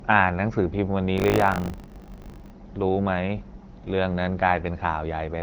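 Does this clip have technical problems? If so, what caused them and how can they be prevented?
Yes. From 1.16 to 2.52 s there is buffer tearing, a 50 Hz robotic buzz. Writer and reader slipped, so roughly a tenth of each buffer replays audio about 40 ms old. Keep the writer safely ahead of the hardware read position, with larger buffers or higher thread priority.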